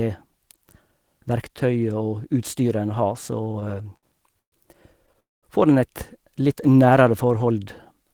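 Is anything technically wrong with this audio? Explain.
Yes, there are three related network-timing problems in this speech clip.

From 3.31 to 4.55 s there are repeated stalls (stutter): eleven short gaps, the longest 129 ms, were filled by stretching the last sound, so the speech drags and hiccups.

At 5.20 to 5.46 s there's a call audio freeze. The sound hangs and fades to silence for about 190 ms, likely because delayed packets emptied the jitter buffer, before resuming where it stopped.

From 6.43 to 7.40 s comes a jitter buffer slow-down. Repeated pitch periods added 94 ms to rebuild the reserve, so the speech runs at about 91% speed with unchanged pitch and drawn-out sounds.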